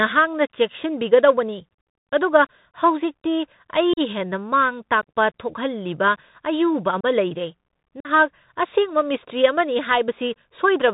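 From start to end the speech carries the Bluetooth CVSD headset codec: nothing above 4 kHz, scratchy s sounds and a granular hiss. The scratchy s sounds are slope-overload grit, not the smoother dullness of a plain low-pass. Unconcealed Bluetooth headset packet loss then cuts hard-edged holes of a few lost packets at 3.93 to 4.00 s (37.5 ms), 5.01 s (15 ms), 7.01 to 7.05 s (30 ms) and 8.00 to 8.09 s (45 ms). The holes have no smoothing or repeated sound, and the speech resumes briefly quieter.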